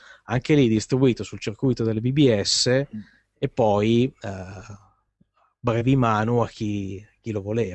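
No technical faults can be heard in this recording.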